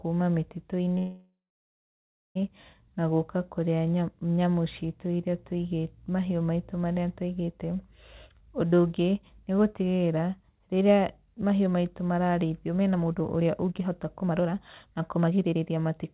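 A speech recording carried over a narrowband call path, with nothing above 4 kHz, which fits G.711 mu-law coding. At 0.98 s there is a call audio freeze lasting until 2.37 s. The last sound smears into a fading buzz or hiss and then about 1 s of silence, and speech resumes without loss, likely from delayed packets draining the jitter buffer. On a waveform this shows as a decaying tail and a flat line. From 8.08 s to 15.92 s a jitter buffer speed-up runs the speech at about 116% speed with unchanged pitch, trimming roughly one and a half seconds in small pitch-period cuts. A spectrogram shows harmonics at normal spacing but syllables compressed in time.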